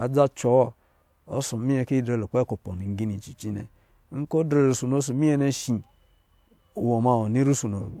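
No technical faults can be heard anywhere in the speech.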